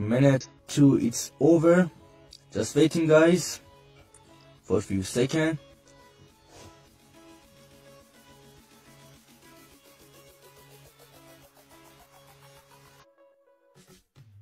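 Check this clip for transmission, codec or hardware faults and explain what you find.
Two problems here. There's comb filtering from a channel delay that runs through the whole clip, and there are two short bursts of damaged data in the compressed stream.

The channel delay (comb filtering) is there from start to finish. One channel trails the other by something like 20 ms, and when the two get folded to mono, whatever they share cancels at evenly spaced frequencies. The first notch sits way down around 20 Hz, and the rest follow closely, so the sound comes across rough or slightly doubled.

The damaged data in a compressed stream shows up at 0.41 to 0.46 s and again at 12.99 to 13.04 s, each about 50 ms long. Some bytes in those spots got lost or overwritten, so the decoder misreads the frames, loses sync and hunts for the next good frame header. What you hear is a brief glitch as it recovers.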